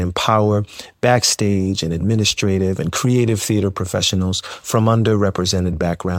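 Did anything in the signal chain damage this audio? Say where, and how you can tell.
No, nothing damaged this audio.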